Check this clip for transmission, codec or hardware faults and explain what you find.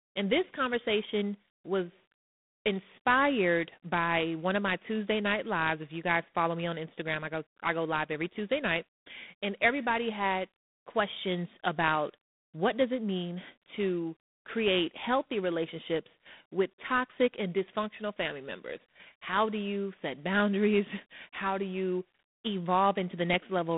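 There's one codec fault running the whole way through this speech. G.726 ADPCM: too few bits per sample leave a harsh, rasping hiss that tracks the speech level, which fits 24 kbit/s. Nothing passes above 3.8 kHz.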